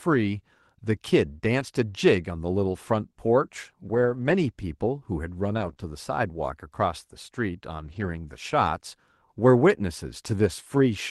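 Packets went missing at 1.59 s, 3.93 to 4.35 s, 5.53 to 5.71 s, 5.78 to 5.84 s, 7.84 to 8.14 s and 10.26 s. Each was a lost packet rebuilt from error correction: the decoder played the low-bitrate copy carried in the following packet, so nothing drops out. Those stretches turn rougher and grainier.

Between 5.73 and 5.78 s, one packet arrived too late for any copy to cover it. This short concealed packet loss was bridged by extending the preceding sound and then fading back into real audio, which leaves a brief smear just before the next rebuilt stretch. Throughout, the Opus call path limits the audio to about 12 kHz, which suggests a moderate call bitrate.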